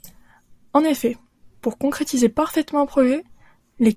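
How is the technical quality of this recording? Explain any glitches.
No glitches can be heard.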